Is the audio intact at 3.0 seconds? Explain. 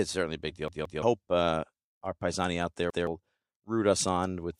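No. After "our paisani out there", a repeated buffer at 2.90–3.07 s plays a 171 ms block twice because new audio arrived late. It sounds like a stutter, and the waveform shows the same segment twice, joined by a hard seam.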